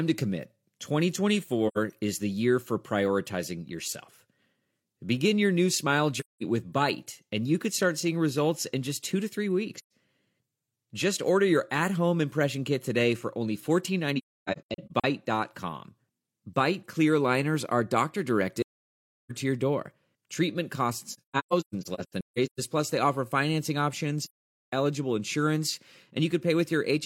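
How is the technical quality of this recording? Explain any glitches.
The recording has repeated dropouts: seven soft-edged silent holes in the speech, each the result of AAC frame loss with muting.

They fall at 1.67 to 1.78 s, 6.19 to 6.43 s (right after "your new smile"), 9.76 to 9.90 s (after "just two to three"), 14.18 to 15.05 s, 18.61 to 19.32 s, 21.11 to 22.60 s, and 24.22 to 24.73 s (between "plus they offer financing" and "eligible insurance"). The gaps run from about 85 ms to about 900 ms of missing sound. At 14.18 s and 21.11 s the losses are broken up: several short gaps are scattered across roughly 0.85 s and 1.45 s, and the longest runs are about 300 ms and 150 ms, so the speech stutters in and out.

The sound fades out and back in. The decoder replaced each lost frame with silence, and the overlapping windows smoothed the edges. The gap lengths step in units of about 43 ms, which points to a missing AAC frame each time.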